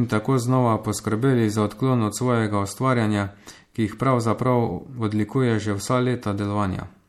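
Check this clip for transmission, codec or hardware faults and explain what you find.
There's MP3 compression damage throughout the speech, plainly audible, and most likely from a low-bitrate encode, something like 64 kbps. Nothing survives above 15.8 kHz, and weak frequency lines flicker between frames, so the speech goes watery and swirly, the s sounds get metallic chirps, and the onsets smear.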